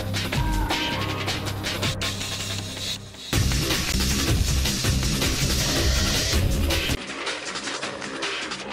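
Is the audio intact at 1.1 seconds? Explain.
Yes, the audio is intact at 1.1 seconds, with no dropout, click, distortion or other fault to be heard there.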